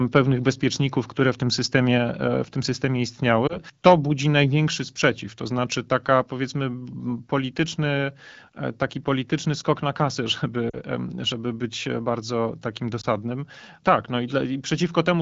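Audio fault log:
3.47–3.59 s, lost AMR speech frame: right after "e w tym systemie" the sound briefly dips and warbles as the decoder repeats the previous pitch and vocal-tract settings at lower gain, consistent with one missing 20 ms frame.
10.69–10.78 s, lost AMR speech frames: just before "żeby być bardzo takim" the sound drops toward near silence, fitting about 40 ms of concealed frames, then returns weak or rough for a moment.
13.02–13.06 s, lost AMR speech frame: right after "żeby być bardzo takim" a short dip and warble occurs, suggesting one dropped 20 ms frame filled with repeated parameters at reduced gain.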